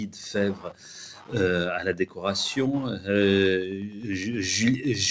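A steady ticking, close to ten clicks a second, runs through the whole clip about 25 dB below the sound, with rougher rasps between. This is Wi-Fi interference: a nearby radio's beacon, repeating every 102.4 ms, plus its data bursts, is picked up and rectified by the audio circuit.

Also throughout, the level pumps and thins, with sustained parts and tails sagging while onsets stay intact, a swing of around 10 dB. This is a noise suppressor applied to music or sounds: a speech-oriented suppressor treats steady, ambient content as noise and keeps pulling it down.

At 0.54 to 0.88 s, 1.14 to 1.34 s, 2.0 to 2.2 s and 3.89 to 4.09 s the sound briefly sinks by about 8 to 9 dB, its held portions or decays cut short. Each is sound cut by the noise suppressor, which mistook that stretch for noise. Nothing comes through above 8 kHz, which fits the call path's G.722 coding at 64 kbps.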